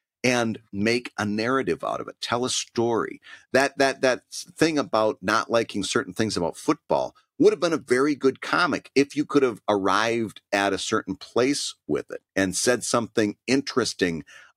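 No technical faults can be heard anywhere in this recording.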